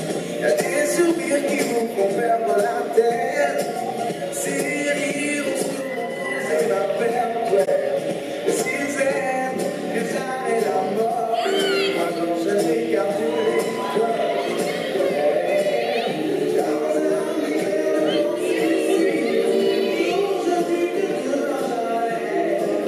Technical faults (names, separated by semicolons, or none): corrupt frame concealed